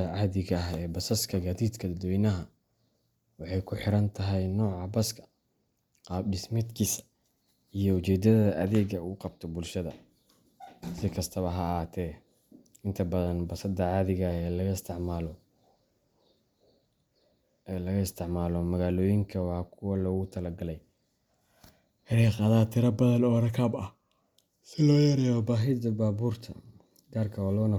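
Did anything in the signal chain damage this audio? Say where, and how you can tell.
Yes. At 22.13 s there is a very brief stall in the speech, well under a millisecond long (about 0.73 ms), where the waveform freezes flat at a held level. It resumes with only a soft edge, since essentially nothing was skipped. This is an underrun with held sample at the driver or buffer stage: the output buffer ran dry, the converter held its last value, and playback continued where it left off. The gap length fits about 32 samples.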